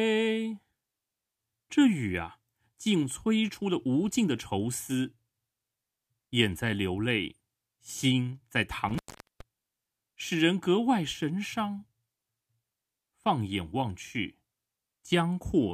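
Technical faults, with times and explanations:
8.89 to 9.41 s, intermittent contact. The speech drops out for about 0.42 s, with crackle as the line breaks and again as it reconnects. Faint hiss remains in the gap. A loose cable or plug briefly opened the circuit.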